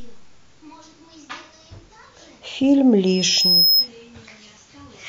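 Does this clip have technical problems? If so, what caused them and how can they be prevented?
Yes. From 3.06 s to 3.88 s a single piercing tone at about 5.2 kHz rises out of the speech. It swells over roughly the first 0.7 s until it sits about 5 dB above the voice, which makes it a loudspeaker feedback squeal. The microphone was hearing the loudspeaker it was feeding, and at that one frequency the loop gain went past unity, so the tone kept reinforcing itself. Keeping microphones out of the loudspeakers' coverage, lowering monitor gain, or notching out the ringing frequency prevents it.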